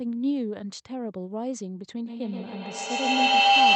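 From 2.07 s to the end, a ringing tone near 700 Hz swells, repeating around the loop about every 150 ms, peaking about 12 dB above the speech. This is feedback howl: the microphone-to-loudspeaker loop gains level each pass until one frequency dominates.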